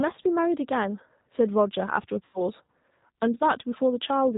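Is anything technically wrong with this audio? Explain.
Yes. A G.729 codec runs throughout the clip. This low-rate speech coder, consistent with 8 kbit/s G.729A, rebuilds the voice from a vocal tract filter, a pitch predictor and a few pulses per frame, and discards everything above 4 kHz. The speech sounds band-limited, rough and plainly synthetic.

VoIP packet loss concealed by the speech codec occurs from 2.25 to 2.42 s. About 90 ms of audio went missing, and the decoder filled the gap by extending its last pitch and filter settings at falling gain. The speech turns into a fading buzzy tone or coloured noise and stays weak briefly afterward.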